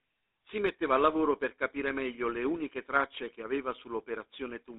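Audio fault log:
Throughout, GSM full-rate codec: the speech has a clear buzzy, gravelly roughness because the codec rebuilds it from a vocal-tract model driven by coarse, regularly spaced pulses. The band runs only from about 250 Hz to 3.7 kHz. The sound fits a 13 kbps stream.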